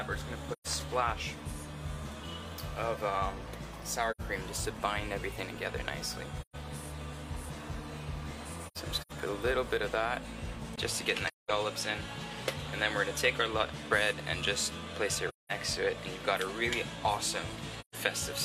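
The audio has seven soft-edged dropouts from AAC frame loss with muting, at 0.52, 4.11, 6.41, 8.67 to 9.12 (scattered losses, the longest run near 0.1 s), 11.28, 15.28 and 17.80 s. Each hole lasts 85 to 213 ms, in steps of about 43 ms, with gentle fades. At 10.76 s there is a 20 ms silence, after which nothing remains above 13 kHz and a new noise floor sits about 35 dB below the signal at a similar level, likely an input switched to a poorer device.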